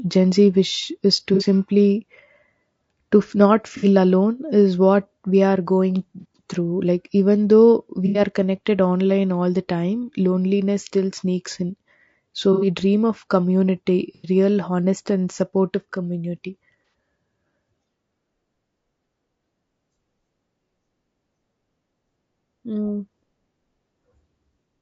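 The speech sounds rough and grainy throughout. Noise fills the gaps between harmonics, and the top band sounds thin and synthetic. The likely cause is low-delay AAC compression, AAC-ELD, at a rate that fits about 32 kbps. Its short frames resolve pitch poorly.

AAC frame loss with concealment strikes seven times. It occurs at 1.34 s after "wish is to", and again at 3.77 s and 6.20 s. At 8.06 s it falls between "through like even though" and "connected online all". Further losses follow at 12.53 s and 14.15 s, and at 16.85 s after "honest and supportive community". Each gap lasts 30 to 90 ms. The decoder fills it from the last good spectrum. The result is a brief smeared, noisy or phasey patch.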